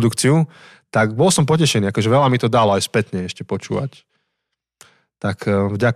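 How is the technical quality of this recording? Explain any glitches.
Nothing here sounds off: there are no glitches to explain, and the recording holds together nicely from beginning to end.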